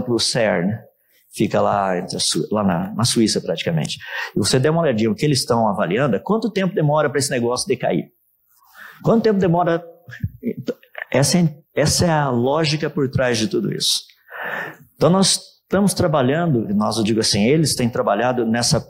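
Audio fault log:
No audible faults detected.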